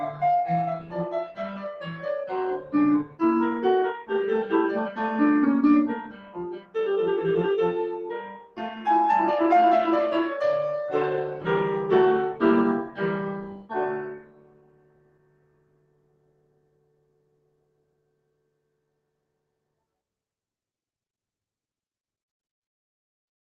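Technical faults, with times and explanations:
Throughout: noise suppressor applied to music. A speech-tuned suppressor treats held tones and tails as noise, so the level swings by roughly 20 dB.
0.79 to 0.95 s, 1.25 to 1.4 s, 3.05 to 3.21 s, 6.03 to 6.38 s, 6.54 to 6.75 s, 8.22 to 8.59 s, 13.45 to 13.72 s, 14.06 to 19.23 s: sound cut by the noise suppressor. Sustained parts sink by about 8 to 16 dB, the longest stretch lasting about five seconds, while attacks pass.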